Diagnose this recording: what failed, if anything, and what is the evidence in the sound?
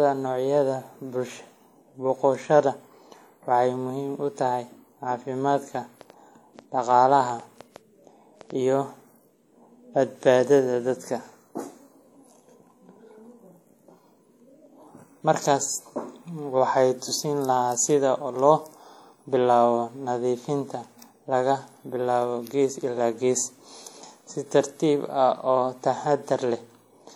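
WMA compression, likely, runs through the whole speech clip and is plainly audible. This is the codec stage. A transform codec like this quantises long blocks of the signal, so its error is smeared over tens of milliseconds around each sound. The result is a ringing, washy quality, with hiss that rises and falls with the speech. The coarseness points to a low bitrate, on the order of 48 kbps. Content extends up to about 20.1 kHz.

A train of clicks runs from 5.51 s to 8.51 s, roughly fifteen clicks at about 4 per second. The spacing is irregular. The clicks reach roughly the level of the speech itself, so they stand out as ticking over the sound. These similar pulses likely come from the analogue side: interference from nearby equipment or a faulty connection or power supply injecting a pulse repeatedly, which the later stages then capture along with the signal.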